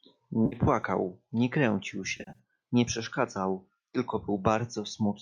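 A speech clip with AAC frame loss with concealment at 0.46 to 0.56 s and again at 2.17 to 2.39 s, where about 140 ms of frames drop out in bursts, the longest roughly 70 ms. The decoder patches each gap from the last good spectrum, so it sounds smeared and noisy. On a spectrogram the harmonics blur into flat, grainy patches; the waveform loses its detail there. The light coding is likely low-delay AAC-ELD.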